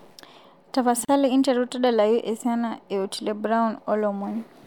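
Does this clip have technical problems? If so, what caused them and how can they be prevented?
Yes. Separately encoded pieces were joined with each run's start delay and end padding left in, causing a gap at a join of encoded pieces. At 1.05 s the speech drops into a 35 ms gap with smeared edges, then resumes where it stopped. Trimming delay and padding before joining prevents this.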